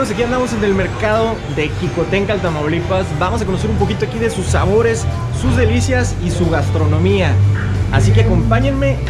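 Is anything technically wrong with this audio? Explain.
No, nothing technically wrong turns up anywhere in this audio on listening.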